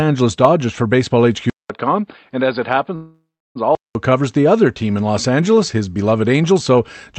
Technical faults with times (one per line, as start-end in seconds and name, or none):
1.50-3.95 input switched to a poorer device
2.95-3.57 call audio freeze